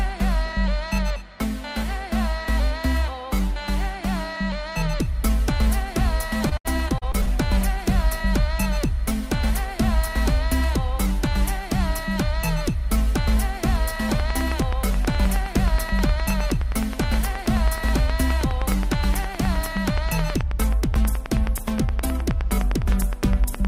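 From 6.49 to 7.29 s, repeated packet loss opens six short holes, each patched by stretching the previous sound, so it turns choppy and robotic rather than silent. From 14.09 s to the end, a train of clicks ticks at an even 9.5 per second, about 10 dB above the sound, likely from electrical interference.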